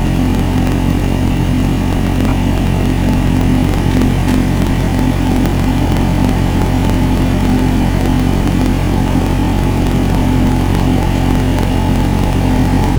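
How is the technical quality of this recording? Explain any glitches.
The recording has one fault, present from start to end: planar audio read as interleaved. Each block holds every left-channel sample followed by every right-channel sample, but playback treats it as alternating left-right pairs. Each block of about 46.44 ms, which fits a 2048-sample block, plays twice at double speed, first the left half, then the right. The overall pace holds, but the sound jumps an octave (12 semitones) higher and carries a flutter at about 21.5 Hz, the block rate.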